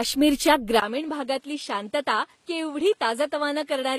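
Speech, and the whole thing carries two layers of compression smear, with nothing above 14.9 kHz. That mix points to transcoding between lossy codecs, likely a Vorbis encode at around 43 kbit/s re-encoded as HE-AAC at around 24 kbit/s, with each pass's artefacts stacked on the other's. At 0.8 s there's a brief 20 ms gap, then the sound turns duller and drops about 10 dB for the rest of the clip. The top end now stops at 11.4 kHz, and a new noise floor sits roughly 40 dB under the signal. That's most likely the input switched to a poorer device, such as another mic or a headset's call profile.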